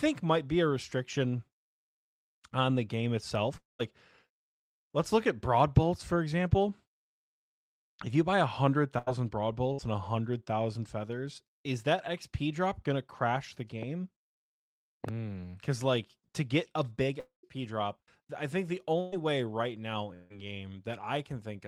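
At 3.57 to 3.81 s the speech cuts out: the last sound is held and fades, then goes silent for about 170 ms before the speech returns, with roughly 220 ms of it gone. This is a long network dropout, likely a stretch where no audio reached the receiver, so it stretched the last sound to cover the gap. At 8.98 to 9.09 s and 9.73 to 9.80 s, shorter gaps of about 83 ms and 58 ms are filled by the preceding sound continued as a fading buzz or hiss, and about 80 ms and 60 ms of speech are skipped. These are bursts of packet loss: packets were lost or came too late, and the receiver concealed each hole by extending and lowering what came before. After "drop gonna crash the", a single sharp pop sits on top of the speech at 13.83 to 13.85 s, about 5 dB above it, and two quick pops follow at 15.04 to 15.11 s, about 10 dB above the speech, which carries on underneath. These loud pops are likely sudden voltage pulses from a plug, switch, static or driver glitch. 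A second long network dropout at 17.20 to 17.47 s holds and fades the sound, goes silent for about 130 ms, and loses about 240 ms. Between "I think the" and "way right now", at 19.00 to 19.14 s, another burst of packet loss fills about 116 ms with a fading continuation, with no silence, and drops about 120 ms. Right after "way right now", at 20.14 to 20.33 s, a third long network dropout fills about 159 ms with no silence before the speech resumes, missing about 160 ms.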